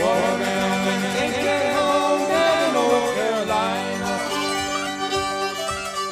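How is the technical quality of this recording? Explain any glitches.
There's one glitch. From the start to 3.22 s, a doubled audio track: a second copy, about 5 dB down, trails by roughly 150 ms, likely from a slower capture path, then cuts off abruptly.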